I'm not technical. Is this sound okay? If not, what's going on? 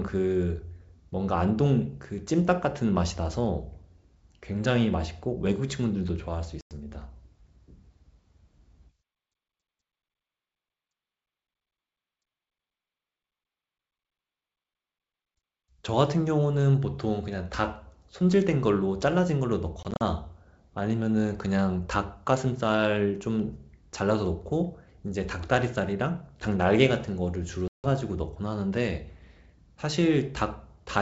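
No. There are short silent gaps at 6.61 s, around 19.83 to 20.02 s (several tiny ones), and at 27.68 s. Each is followed by slightly distorted speech that settles quickly. This is packet loss on an ADPCM call: bits of the call went missing, and the receiving end briefly lost track of the sound before catching up.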